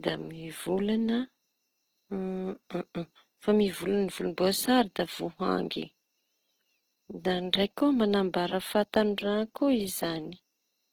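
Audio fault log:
Throughout, Opus compression. The speech sounds rough and grainy across the whole clip, with plainly audible damage. The cause is likely an Opus encoder in its music (CELT) mode. At a low rate, near 16 kbps, it runs short of bits. It keeps each band's energy but fills the detail with folded copies or noise. So tones turn hissy instead of hollow. The full bandwidth stays, with content reaching about 20.4 kHz.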